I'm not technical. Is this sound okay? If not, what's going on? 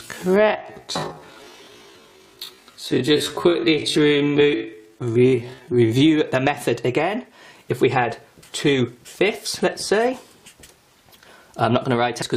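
No. From 0 to 6 s there is a time-stretched section: the sound plays at half speed but keeps its normal pitch, so it drags. That is likely software repeating tiny slices to lengthen it, unlike a slow tape, which would also drop in pitch. Then, from 12.21 to 12.23 s, damaged data in a compressed stream gives a brief glitch, as the player loses its place in the file and jumps to the next readable chunk. A plain click would leave nothing missing.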